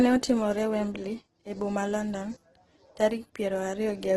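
Throughout, the speech is grainy and rough, with nothing above 12.2 kHz. This is likely Opus compression filling bit-starved bands with noise, which fits about 12 kbps.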